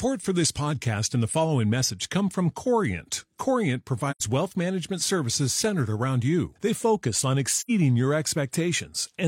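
At 4.11 to 4.20 s, just before "wealth management services centered", and at 7.58 to 7.70 s, after "focus on", the speech fades into brief silence: AAC frame loss with muting. About 85 ms of audio is zeroed, which fits two lost frames. Overlapping windows soften the edges, so unlike a hard dropout the hole is soft-edged.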